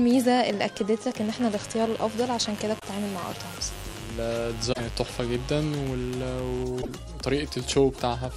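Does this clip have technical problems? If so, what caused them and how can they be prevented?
Yes. A raspy 50 Hz mains buzz runs from 1.17 to 6.63 s, roughly 15 dB below the sound. Switching spikes twice per cycle spread harmonics into the kilohertz range. Shielded cabling and keeping dimmers and rectifiers off the audio circuit prevent it.

Brief glitches at 2.78–2.84 s, 4.72–4.80 s and 6.81–6.89 s make the audio skip ahead. They likely come from a broken MP3 bit reservoir: cut frames, consistent with 26.1 ms MP3 frames, leave the following frames borrowing the wrong bytes. Cutting or streaming MP3 only at clean frame boundaries prevents this.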